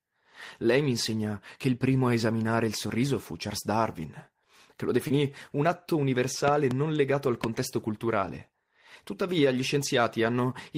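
At 5.07 to 5.12 s, between "che lo" and "un atto", the speech briefly smears and wobbles, as if the sound were stretched over itself for an instant. This is short concealed packet loss: about 20 ms of audio arrived too late to decode. The receiver bridged it with roughly 24 ms of sound extrapolated from what came before, then blended back into the real signal.

At 6.48 to 6.74 s, right after "un atto" and before "legato al", two sharp loud pops jump out, peaking about 15 dB above the speech, which continues beneath them. A single pop follows at 7.44 s, just after "legato al", also peaking about 15 dB above the speech. These are likely sudden voltage steps or spikes, from a connector, switch or static discharge, added onto the signal.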